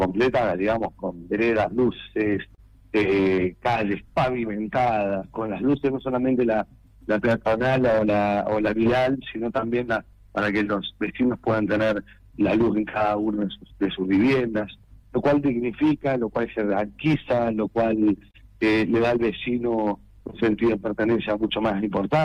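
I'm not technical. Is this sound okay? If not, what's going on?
No, it isn't quite right. The pace feels slightly unsteady and a little slow throughout. This is clock drift between sender and receiver: the sending device's clock runs roughly 3% slower than the receiving one, so the receiver keeps running short of sound to play.

To cope, it makes repeated timing corrections from 0.22 s to 22.0 s, repeating tiny pieces so playback runs at about 98% speed and stretches the audio by roughly half a second overall. You may notice faint hiccups rather than any obvious jump.

There are also brief ticks or smeared moments in four stretches: 1.62 to 2.6 s, 5.07 to 5.73 s, 10.13 to 12.98 s and 14.84 to 20.23 s. These are scattered short gaps, a few tiny lost bits each, the longest about 30 milliseconds, patched by stretching the sound just before.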